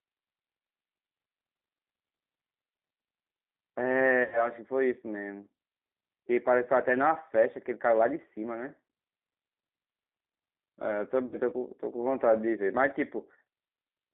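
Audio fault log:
Throughout: G.729 codec. Speech is confined to roughly 250 Hz to 3.6 kHz and sounds rough and synthetic, fitting an 8 kbit/s CELP rebuild, not plain band-limiting.
4.24–4.49 s and 11.26–11.36 s: VoIP packet loss concealed by the speech codec. Gaps of about 80 ms and 60 ms become a fading extrapolation, not silence, and the voice stays weak briefly afterwards.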